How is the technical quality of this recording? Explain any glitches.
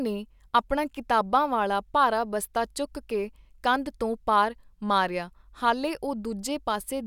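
The recording has no audible glitches. There is nothing in the speech that calls for a technical explanation.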